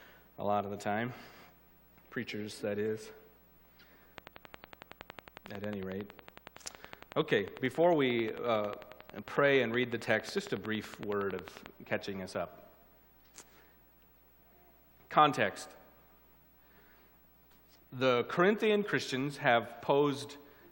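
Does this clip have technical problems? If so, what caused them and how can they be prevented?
Yes. A train of clicks runs from 4.18 to 11.67 s: about seventy pops at a steady 11 per second, reaching about 10 dB above the sound. Their even spacing, unlike random crackle, likely points to interference or a faulty connection or power supply. Keep cables and the interface away from other equipment.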